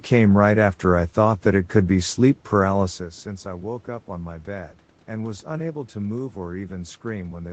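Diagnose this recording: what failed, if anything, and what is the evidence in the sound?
Nothing failed in this recording, and there is no evidence in the sound of any fault.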